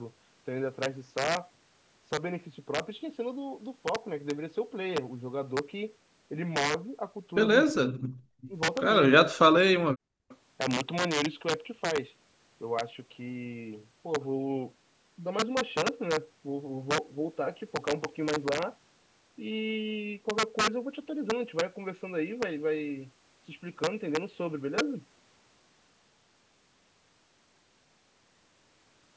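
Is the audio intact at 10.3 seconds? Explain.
No. Three faults are present around 10.3 seconds.

From 10.23 to 10.29 s the background is gated by the echo canceller. The canceller judged that the far end was playing through the loudspeaker and turned the microphone down hard, by about 34 dB at the deepest point. The room sound drops out for a brief moment, then comes back when the canceller releases its grip.

From 10.29 to 10.37 s a faint delayed copy of the speech arrives about 345 ms late. It sits very low, far beneath the direct speech, and lasts only a short scrap. The likely cause is echo leak. The far side's loudspeaker sound reached its microphone, its echo canceller missed part of it, and that residue was sent back into the call.

Integer overflow runs through the whole clip, including this moment. Peaks were pushed about 6 dB beyond the largest value the integer format can hold. 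Instead of being limited, they wrapped around to the opposite sign. Only a small fraction of samples are affected. Each one jumps across the full range and produces a violent crack on loud passages, far harsher than ordinary clipping.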